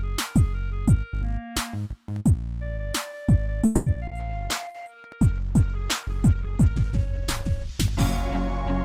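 At 3.65 s the sound stops moving forward and the last moment is drawn out as a buzzing or hissing continuation that fades over 0.21 s, until 3.88 s. Then the audio resumes exactly where it left off. This is a call audio freeze, most likely caused by packets stalling in transit so that the jitter buffer ran dry. Unlike a dropout, nothing is skipped: 210 ms of filler is inserted, and everything after it lands that much later.

Just after this come three instances of short concealed packet loss, at 3.94–3.97 s, 4.07–4.10 s and 4.10–4.13 s. In each, about 20 ms never reached the decoder in time. The receiver patched the hole by extending the preceding sound and then cross-fading back into real audio. Each one is heard as a tiny smear or wobble. Unlike the freeze, the timing doesn't stretch, and about 20 ms of real material is lost in each.

From 4.2 s to the end there is a call bitrate drop. 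The encoder's budget falls from 96 kbps to 13 kbps and stays at the bottom for roughly 2.7 s. With so few bits, quantisation becomes coarse and the upper frequencies are cut away. The sound turns muffled, rough and watery. Unlike the brief packet faults, this is a sustained change in tone that lasts until the clip ends.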